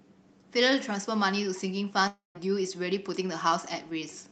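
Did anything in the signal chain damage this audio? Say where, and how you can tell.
Yes, a long network dropout from 2.07 to 2.37 s, likely packet loss. Concealment stretches the last sound into a fading buzz before silence, unlike an abrupt mute or click.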